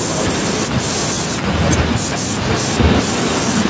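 From 0.23 to 1.37 s, at 1.68 to 1.84 s, and from 2.41 s to the end, an echo leak adds a copy of the speech trailing 380 ms behind. The copy sits about 10 dB below the speech, rising to about 5 dB below in the last stretch. It is likely loudspeaker pickup that an echo canceller failed to remove. Its fixed lag sets it apart from room reverberation, which smears smoothly instead of repeating.

At 1.86 to 2.05 s and 2.22 to 2.33 s, speech is suppressed in double talk. The level falls by around 40 dB in the first dip but only a few decibels in the second, likely because the canceller turned down the talker along with the echo. Unlike packet loss, these dips come from the level being turned down rather than from audio going missing.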